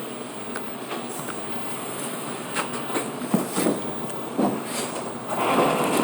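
No technical faults are audible.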